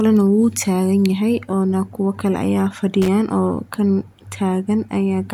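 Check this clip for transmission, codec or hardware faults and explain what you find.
One hardware fault stands out in this speech clip. Loose connector crackle, from 3.02 to 3.08 s: a worn or dirty contact in the signal path briefly makes and breaks, chopping the audio, so roughly 70 ms of irregular, scratchy crackle cuts across the speech.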